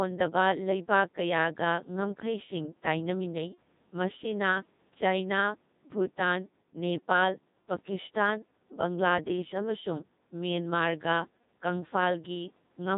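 From start to finish the speech passes through a Codec 2 vocoder, heavily damaged; the robotic, buzzy timbre fits its 2.4 kbit/s mode. Only pitch, voicing, energy and a coarse envelope survive, resynthesised from sine waves. A spectrogram shows over-regular, smeared harmonics up to the 4 kHz edge, and the waveform no longer resembles the original.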